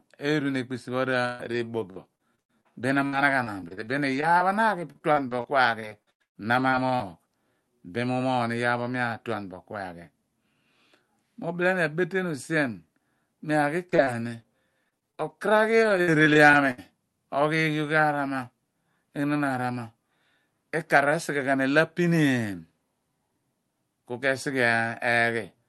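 From 1.11 to 7.02 s, repeated packet loss (robotic sound) leaves the speech choppy. The receiver keeps patching holes by extending the last sound, covering about 18% of that stretch, with gaps up to 138 ms. Shorter bouts follow at 13.90–14.46 s and 14.84–16.80 s.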